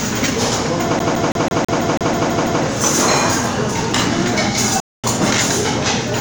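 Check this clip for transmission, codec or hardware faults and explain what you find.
Two faults turn up here. From 0.99 to 2.63 s there's a CD stuck on one turn: a scratch keeps knocking the laser back a track, so a 164 ms slice repeats ten times, each jump marked by a tiny mute, giving that quick, even stutter. Then at 4.80 s there's a playback stall of about 234 ms. The sound cuts out mid-flow until 5.04 s, most likely because the player ran dry of data or its thread got blocked, before it picks back up.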